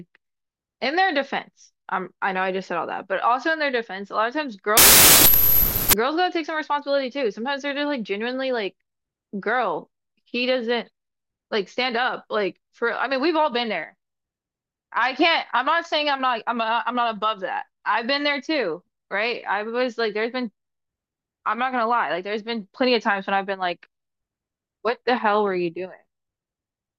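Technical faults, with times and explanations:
4.77 to 5.93 s, wrong sample width: loud noise buries slowed, lower-pitched speech at 0.75 speed, fitting 32-bit samples read as 24-bit; byte-order errors keep speed.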